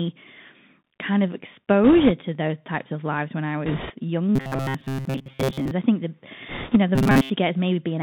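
A speech recording carried over a Bluetooth CVSD headset codec, audible throughout: the sound is confined to roughly 150 Hz to 3.7 kHz, with a granular hiss beneath it and scratchy, overloaded sibilants that set it apart from a merely band-limited telephone line. Bit errors on a Bluetooth voice link appear at 1.84–2.12 s, 3.66–3.94 s just after "of lives when I", and 6.49–6.77 s. Each is a brief rushing crackle rather than sharp clicks, because every flipped bit carries little weight, and the burst after "of lives when I" is the roughest, at about 5% errors against about 3% for the others. Robotic sound from repeated short buffers occurs at 4.36–5.71 s, ending just before "I think the", and at 6.95–7.30 s, after "know the". Unlike the bit-error noise, this is a rigid metallic buzz at a fixed 134 Hz. That fits a buffer of about 7.5 ms being replayed in place of most of the incoming audio, likely because new data was arriving too slowly.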